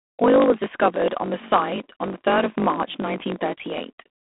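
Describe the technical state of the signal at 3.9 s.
At 3.9 s, as throughout, the speech carries a steady 50 Hz buzz and runs about 1.07 times fast at near-normal pitch: a truncating block size mismatch, discarding each block's tail, which fits 1024-sample blocks. Over that sits a harsh, rasping hiss tracking the speech level, confined to 200 Hz–3.5 kHz with nothing above 3.8 kHz, which points to G.726 ADPCM at around 24 kbit/s.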